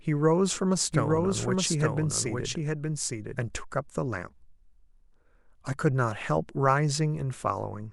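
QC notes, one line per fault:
0.92–3.56 s, doubled audio track: a second full-band copy of the speech runs about one second behind the original, roughly 5 dB quieter, with no decay or room colour, and it cuts in and out abruptly at both ends; likely a slower second capture path mixed back in.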